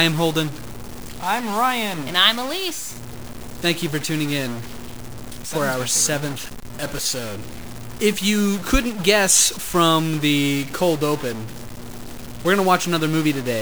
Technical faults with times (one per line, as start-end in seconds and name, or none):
0.00-13.61 stuck bit